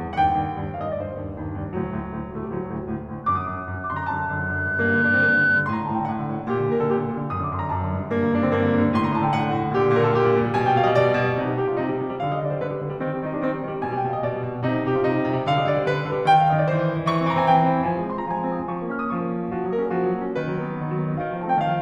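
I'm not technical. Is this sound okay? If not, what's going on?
No. Loudspeaker feedback squeal, from 3.24 to 5.89 s: a microphone picks up its own loudspeaker and re-amplifies it in a loop, so one pitch, around 1.5 kHz, swells over about two seconds into a piercing whistle above the music.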